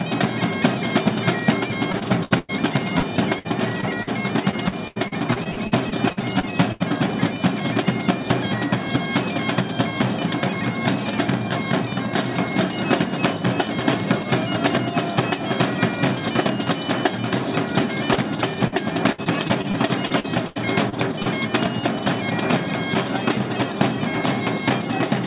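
From 1.92 to 2.51 s there is repeated packet loss, heard as robotic sound. Packets kept arriving too late or not at all. The receiver patched each hole by extending the last sound. Four holes fall here, the longest 100 ms. About a third of the stretch is patched audio. It sounds choppy. The pattern returns from 2.99 to 4.09 s with four shorter holes. It comes back from 4.51 to 6.82 s with thirteen holes.

Next comes short concealed packet loss, twice. The first runs from 18.14 to 18.18 s, with 17 ms filled in. The second runs from 18.68 to 18.74 s, with 43 ms filled. Each time a few hundredths of a second never reached the decoder. The gap was filled by continuing the previous sound, then blended back. Each is heard as a quick smear or wobble.

Repeated packet loss returns from 19.12 to 21.28 s, with ten holes. The longest is 77 ms. The same robotic chop is heard. Throughout, nothing sounds above 4 kHz, which fits a G.711 A-law call path at 64 kbps.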